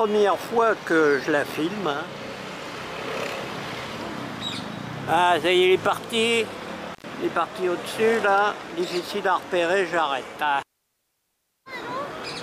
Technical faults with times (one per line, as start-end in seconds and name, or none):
6.93-7.04 intermittent contact